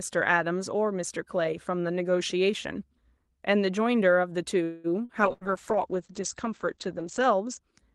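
From 4.63 to 4.91 s the audio stalls: the last sound is drawn out as a fading buzz-like continuation lasting about 0.21 s, and then the sound picks up exactly where it left off, with nothing skipped. That pattern is a call audio freeze, likely caused by packets arriving late enough that the jitter buffer ran dry. The receiver stretched what it had until delivery resumed, so the playout is now running about 0.21 s behind.

Between 5.05 and 5.12 s comes a short concealed packet loss. Roughly 40 ms of audio never reached the Opus decoder in time, so the receiver synthesised a stand-in from the preceding sound and crossfaded back into real audio. It is heard as a brief smear or wobble.

At 5.23 s a call bitrate drop sets in and lasts until 7.67 s. The connection's bandwidth estimate collapsed, and the encoder was cut from 32 kbps to 9 kbps, holding at the lowest rate for about 2.1 s. At that rate Opus codes far more coarsely and narrows its audio band from 12 kHz to 8 kHz. 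The result is a duller, muffled top end with a rough, watery texture throughout that stretch, lifting as the rate recovers near 7.67 s.

Inside that degraded stretch, from 5.33 to 5.44 s, a burst of packet loss removes about 80 ms of consecutive audio. The receiver extended the last sound and faded it down across the hole, producing a short held buzz or dying hiss. When playback resumes, it jumps ahead, so the 80 ms that should have been heard between those points is missing rather than delayed.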